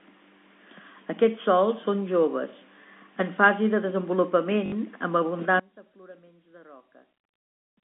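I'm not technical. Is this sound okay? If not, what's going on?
No. At about 4.66 s the speech catches for a split second, a brief robotic stutter lasting about 60 ms. That is packet loss with last packet repeated: a few small chunks of sound went missing, and the system filled the gap by replaying the last one.

From about 5.6 s to the end, the speech suddenly drops to a faint version of itself. The likely cause is one channel inverted: one side of the stereo is flipped upside down, so the two sides cancel when combined.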